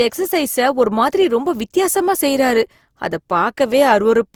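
Generation loss runs through the whole speech clip: the sound is swirly, smeared and hollow, with blurred consonant onsets and nothing above about 20.3 kHz. The likely cause is roughly three successive Opus passes, each requantising on a fresh frame grid, at a rate fitting 48 kbit/s.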